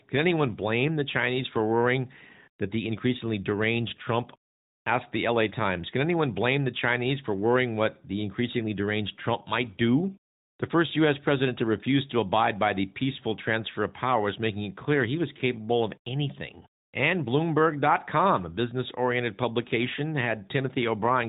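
Nothing in the speech stood out as a fault on listening.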